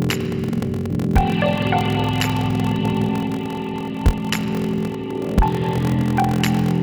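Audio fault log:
Throughout, block size mismatch (padded): there's a steady buzz at about 43.1 Hz sitting under everything, and the whole thing drags along at roughly 0.861 times normal speed while the pitch stays about where it should be. One stage is handing over shorter blocks than the next one reads, which fits a 1024-sample read, so each block gets a tail of zeros. Those tiny silent gaps repeat at the block rate, giving the buzz and stretching the timing.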